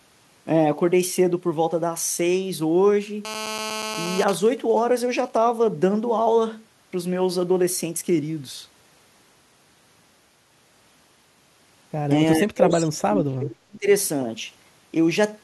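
From 3.25 to 4.24 s a GSM phone buzz sits about 9 dB below the speech: a hard, raspy 217 Hz tone from a handset in a call whose radio bursts the audio circuit rectifies. On a spectrogram it shows as evenly spaced harmonic lines stacked from 217 Hz upward.

Right after, from 4.28 to 5.42 s, GSM signalling bursts take over, roughly 15 dB down, as the same phone's user falls silent. They form even ticks with a longer 217 Hz buzz twice a second, which appear as short vertical harmonic blocks separated by gaps.

Between 12.38 and 13.87 s the speech sinks by around 35 dB at its deepest. This is likely speech suppressed in double talk: with both sides talking, the echo canceller turned the talker down. The waveform envelope collapses.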